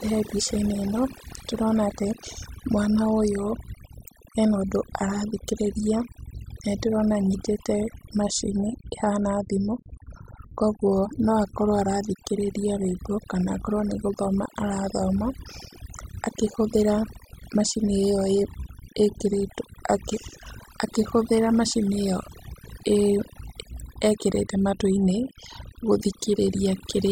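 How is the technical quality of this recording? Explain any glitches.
The recording has one fault that runs through the whole speech clip: overdone noise removal. A noise reduction stage was pushed too hard, so any frequency band sitting near its noise estimate gets cut almost to nothing. The quieter parts of the voice are removed along with the noise. The pauses drop to near silence with twinkling, warbling specks. On a spectrogram, the background shows as dark gaps scattered with isolated bright dots, and the voice's harmonics look patchy and broken.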